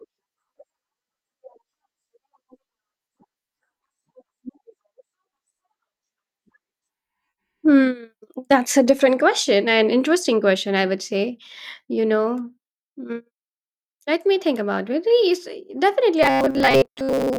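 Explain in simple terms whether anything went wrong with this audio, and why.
From 16.23 s to the end, the speech turns into a robotic sound from repeated short buffers: a stiff 134 Hz buzz, likely from tiny looped snippets replacing most of the real audio.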